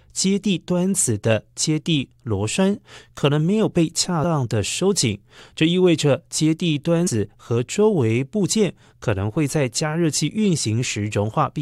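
At 4.23 s and again from 7.06 to 7.08 s, compressed frames are skipped: the speech jumps ahead roughly a tenth of a second. Waveforms and spectrograms show an abrupt discontinuity.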